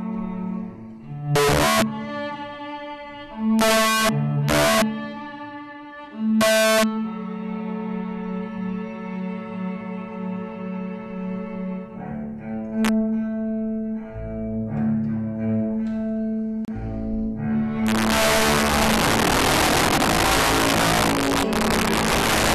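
A gain stage that wraps instead of limiting causes integer overflow at 1.36–1.82 s, 3.59–4.09 s, 4.49–4.82 s, 6.41–6.83 s and, barely over the limit, 12.85–12.89 s. Peaks pushed about 0 to 7 dB past full scale flip to the opposite sign, giving harsh cracks far sharper than clipping. At 16.65 s, separately encoded pieces were joined without trimming the encoder delay and end padding, so a 30.5 ms gap at a join of encoded pieces cuts the sound off with smeared edges before it resumes where it stopped. From 17.87 s to the end, overflow returns with about 8 dB of overdrive, producing violent cracks on the peaks.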